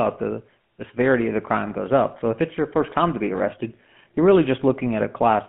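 From start to finish the speech has a buzzy, gravelly roughness and a boxed-in, narrow tone, with nothing above about 3.4 kHz and little below 150 Hz. That is the GSM full-rate codec, whose damage is plainly audible here. It models the vocal tract and drives it with a coarse, regularly spaced pulse train, keeping only a fraction of the excitation detail, which fits a 13 kbps stream. The grainy buzz comes from that thinned excitation.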